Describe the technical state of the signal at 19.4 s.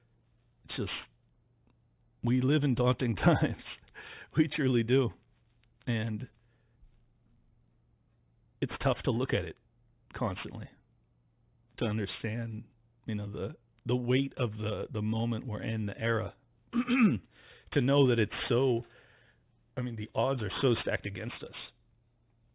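At 19.4 s the speech carries aliasing, as it does through the whole clip. The audio was taken to a lower rate with no filter first, which fits an 8 kHz rate. Content above 4 kHz folds back down, sitting roughly 20 dB below the signal. Sibilants sound gritty and metallic.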